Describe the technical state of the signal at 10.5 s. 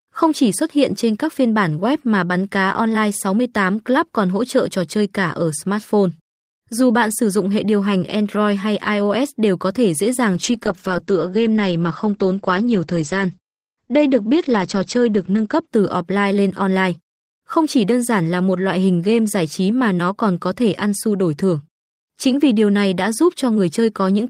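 At 10.5 s the signal sits inside a call bitrate drop running from 10.36 to 15.73 s. The encoder falls from 32 to 10 kbps, coarsening the speech and cutting the audio band from 20 kHz to 8 kHz, so it sounds muffled and rough. A spectrogram shows a flat ceiling at 8 kHz.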